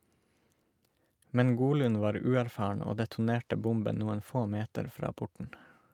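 Nothing goes wrong anywhere in this stretch of speech, so there's no technical fault to point out.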